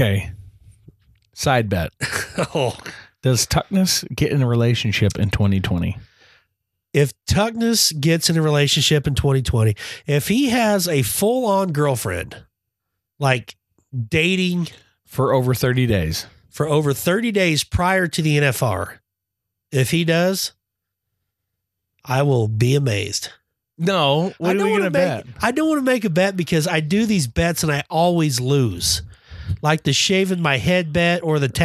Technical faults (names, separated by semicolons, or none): none